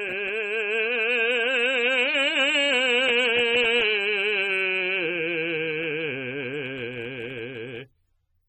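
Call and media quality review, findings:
Music, whole clip, 0 to 8.5 s: plainly audible smearing and warbly, fizzy texture on sustained content; nothing above 18.6 kHz. Likely AAC compression, AAC-LC quantising spectral lines coarsely, which fits a low bitrate near 27 kbps. Unlike a simple low-pass filter, the damage sits inside the band too, with swirling holes and noise-like fill, not just a missing top end.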